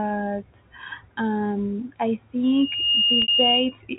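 A telephone-band speech recording, limited to below 4 kHz as expected of G.711 coding, has two faults. From 2.43 s to 3.78 s there is loudspeaker feedback squeal: a steady 2.8 kHz tone swells over roughly half a second until it sits around 5 dB above the speech. The microphone is picking up the loudspeaker it feeds, and at that frequency the loop gain exceeds one, so the tone keeps growing until it is limited or the loop breaks. Inside that stretch, from 3.22 s to 3.28 s, is packet loss with pitch repetition. A 60 ms gap, which fits three 20 ms packets, was bridged by repeating the last pitch period and fading it down. This produces a brief held, buzzy sound, and the signal returns through a short cross-fade.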